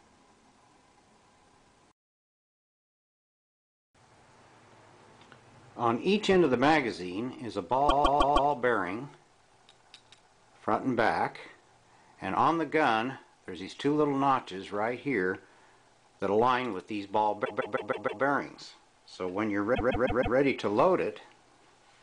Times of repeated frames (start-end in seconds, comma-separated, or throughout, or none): 7.88-8.50, 17.44-18.22, 19.74-20.36